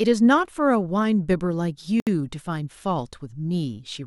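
Separately encoded pieces of this speech were joined without trimming, leaving a gap at a join of encoded pieces at 2.00 s. Each encoder pass leaves startup delay and end-of-file padding as silence, and both remained at the seam. The result is a dropout of about 68 ms, running to 2.07 s, that cuts into continuous speech with smeared edges. The speech then resumes exactly where it broke off.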